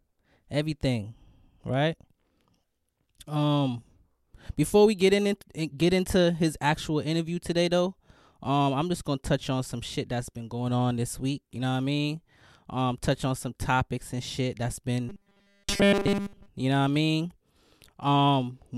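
From 15.09 to 16.48 s the speech goes robotic, the sound you get from repeated short buffers. It turns into a rigid, metallic 200 Hz buzz that only loosely tracks the words, with essentially all of it repeats. That likely means 5 ms chunks looped because fresh audio wasn't arriving.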